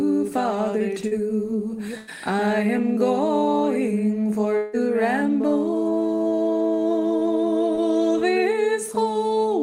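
At 1.07 to 1.13 s, short concealed packet loss removes about 40 ms. The receiver extends the preceding sound across the hole, leaving a brief smear.

From 1.97 to 2.09 s, a burst of packet loss takes out about 100 ms. The last sound is held and fades, then audio resumes further on.

At 4.57 to 4.75 s, the sound stretches into a fading continuation for about 0.16 s, with no silence. Then it jumps ahead. This is likely a long network dropout.

At 7.75 to 7.79 s, another short concealed packet loss hides 20 ms behind a tiny smear.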